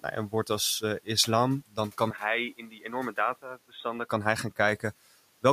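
Speech runs for about 5.5 seconds, and from 2.10 s to 4.09 s its character changes abruptly. The band narrows and the sound dulls, the level falls by a few decibels, and a different, faint noise floor replaces the room's. At 4.09 s the fuller sound returns, with no gap at either boundary. The likely cause is the input switched to a poorer device, such as a second microphone or a headset's call mode. A plain low-pass filter or codec bandwidth drop would dull the top end but leave the loudness and background untouched, whereas here all three shift together. Inside that stretch, between 2.58 s and 2.85 s, the speech cut by the noise suppressor is audible. The suppressor mistook parts of the speech for noise and pulled them down by up to about 9 dB, roughly 150 ms in total, so those parts sound swallowed. Unlike a dropout, the sound only thins and never vanishes, and the background sinks along with it. 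Outside the switched stretch, the ordinary room noise sits about 25 dB under the speech and is part of the recording.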